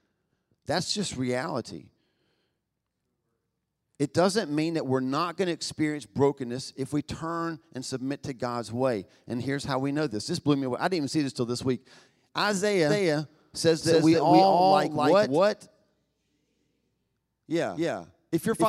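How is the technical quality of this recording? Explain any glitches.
The recording has one clear glitch, a doubled audio track. From about 12.9 s to the end, a second copy of the speech enters abruptly, roughly a third of a second behind and about as loud, most likely from a slower capture path. It sounds like a dry, stuttering echo, and a spectrogram shows every syllable repeated as a shifted full-band twin with no decaying tail.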